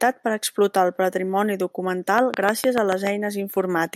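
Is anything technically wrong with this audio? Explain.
Yes. Just after "per explotar el patrimoni", from 2.18 to 3.08 s, a train of clicks runs over the speech: about seven near-identical pulses at a regular 6.8 per second, peaking about 15 dB above the speech. The likely cause is interference from nearby equipment or a faulty connection or power supply injecting repeated pulses. The steady pace and matching shape of the clicks set them apart from random crackle or an isolated pop, and they sound like mechanical ticking laid on top of the speech.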